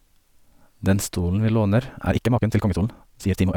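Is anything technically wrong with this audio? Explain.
Yes. Time-stretched section from 2.07 s to the end: the pace abruptly doubles while pitch holds, sounding rushed, likely from software dropping short pieces to shorten the audio.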